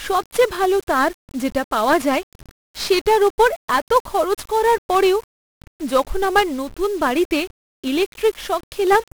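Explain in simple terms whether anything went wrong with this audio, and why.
The whole recording suffers from 1-bit DFPWM compression, which saves each moment of sound as a single up-or-down step. That crude guessing leaves a fuzzy, crackly roughness riding on the speech and buries the crisp high sounds in hiss. Unlike steady background hiss, this noise follows the speech itself.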